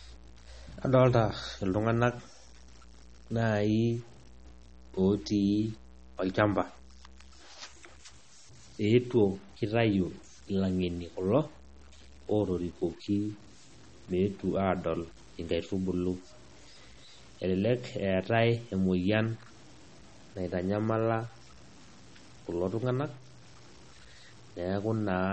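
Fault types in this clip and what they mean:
Low bit depth without dither: The speech carries a grainy, buzzy distortion that tracks the voice, roughest on quiet syllables and decaying tails, where low-level sound breaks into gritty sputter. The likely cause is samples truncated to very few levels with no dither, which fits 8-bit audio, leaving error only around 30 dB below the signal. On a waveform, quiet stretches show visible stair-step levels; a spectrogram shows a broadband noise haze that rises and falls with the speech.
MP3 compression: The speech sounds watery and swirly, with metallic chirping on s sounds and softened consonant attacks, and the damage is plainly audible throughout. This is likely heavy MP3 encoding at a bitrate that fits roughly 32 kbps, where the encoder drops the treble and discards weak frequency detail that flickers between frames. A spectrogram shows a hard ceiling with nothing above 8.4 kHz, plus patchy, blocky holes in the upper bands that switch on and off over time.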